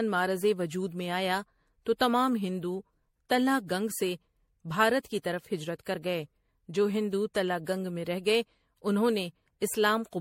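A speech recording carrying generation loss from start to finish: the sound is swirly, smeared and hollow, with consonant attacks blurred. It most likely passed through MP3 encoding and decoding around seven times, with each new pass quantising on a shifted frame grid so that artefacts accumulate, in a way that fits a low rate near 64 kbit/s. A spectrogram would show a hard ceiling at 16.5 kHz and scattered holes across the upper bands, and the waveform's transients would look softened.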